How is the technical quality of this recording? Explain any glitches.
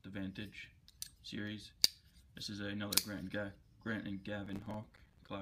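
One glitch stands out: processor overload crackle from 4.46 to 5.29 s. The processor repeatedly missed its deadlines for short buffers of around 5 ms, and some thirty of them came out as silence. The hard-edged gaps chop the sound into a gritty, tearing crackle until the load passes.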